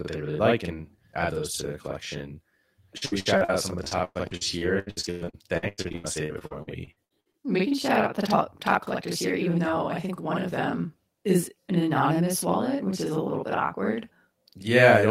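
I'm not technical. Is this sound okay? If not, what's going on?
No. Two things went wrong.

Throughout the clip there is a channel delay (doubling). One of the two recording channels arrives about 46 ms later than the other, and when the two are combined into one, both copies play. The delay likely comes from a 2048-sample buffer. The result is that every sound seems to happen twice in quick succession, like a stutter or a short echo at the same loudness.

From about 2.97 to 7.35 s there is repeated packet loss (robotic sound). Small chunks of the audio went missing in transit around three dozen times. The system filled each gap by stretching the sound just before it, and about a third of that stretch is patched this way. The longest gap is about 0.11 s. The speech there sounds choppy, with bits dropping out.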